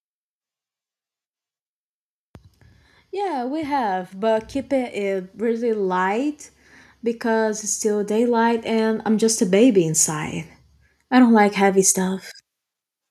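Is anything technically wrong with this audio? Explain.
Yes. Automatic gain rising occurs twice: from 3.1 to 6.41 s the level climbs by about 8 dB, and from 7.21 to 10.36 s by about 7 dB. The gain control judged the input too quiet and raised its gain step by step over roughly three seconds each time, so speech and background noise swell together. That slow, joint rise distinguishes it from compressor pumping, which breathes quickly around individual syllables.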